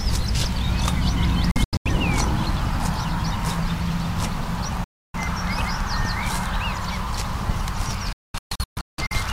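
At 1.51 to 1.91 s, 4.84 to 5.19 s and 8.13 to 9.16 s, a digital broadcast dropout mutes the sound as bad frames are silenced with 3 ms fades. The first and last are clusters of short holes, the middle one a single gap. On a spectrogram these show as blank vertical bands, and in the waveform as flat stretches.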